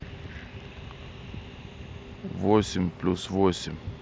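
A speech recording with one brief dropout at about 3.57 s. The fault is concealed Bluetooth headset packet loss. Voice packets between headset and phone went missing for about 15 ms, which fits two lost frames. The receiver filled the gap by repeating the closest-matching slice of the waveform just before it. The patch sounds like a short buzzy tone held at full level. A small warble marks the moment real audio resumes. Around it, the mSBC headset codec adds its light wideband graininess.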